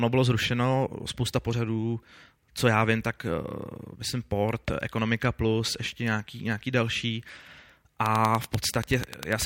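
From 8.06 s to 9.43 s a train of clicks runs over the speech: about fifteen near-identical pulses at a regular 10.3 per second, standing well above the speech level. It sounds like steady ticking or popping that carries through pauses too, most likely from electrical interference or a faulty connection or power supply. On a waveform it shows as evenly spaced sharp spikes. A spectrogram shows thin vertical broadband lines at equal intervals.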